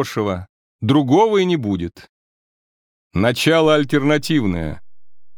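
At about 3.65 s there's a DC step: the waveform's zero line suddenly jumps by roughly -33 dBFS and stays offset right through to the end. You hear it as a single low thump or click at that instant, while the sound itself carries on unchanged.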